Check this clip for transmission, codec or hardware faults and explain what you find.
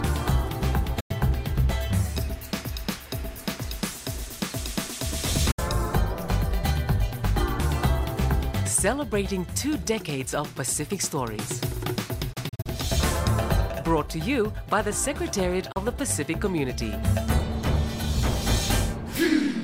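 Digital broadcast dropout, four times: 1.00–1.11 s, 5.51–5.59 s, 12.33–12.66 s and 15.72–15.77 s. The receiver muted on bad frames with an 8 ms fade, so the sound drops to silence and that material is gone. At 12.3 s it's several short holes over 320 ms, none longer than 32 ms, which fits 32 ms frames.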